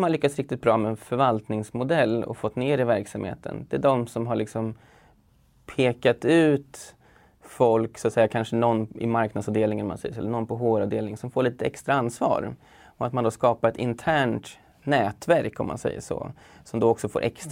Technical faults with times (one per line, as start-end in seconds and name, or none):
none